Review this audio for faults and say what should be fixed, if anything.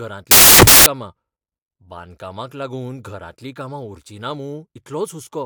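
From 0.31 to 0.86 s, loud, harsh broadband noise replaces the speech. These are samples built from the wrong bytes: misordered bytes push the noisy low bits into each value's high end. To fix it, match the reader's byte order and alignment to the file's declared sample format.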